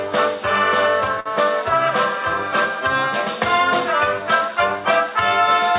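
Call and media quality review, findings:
Short stall from a late packet, 1.20–1.28 s: last sound held about 55 ms with slight buzz or dip, then resumes at the same point. Jitter buffer ran empty; receiver stretched audio until arrival. Unlike packet loss, nothing skipped; playout delay grows 55 ms.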